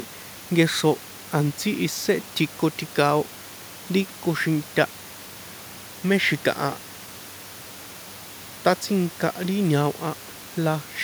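Nothing stood out on listening to this speech, with only the room's own background noise sitting about 22 dB beneath it.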